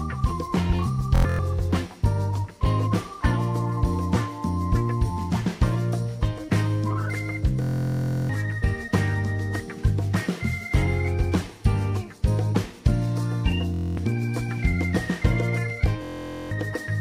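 Bluetooth stutter hits at 1.16 to 1.39 s, 7.62 to 8.29 s, 13.74 to 13.97 s and 16.03 to 16.51 s. Late packets make short slices repeat as a buzz. Then the sound jumps ahead.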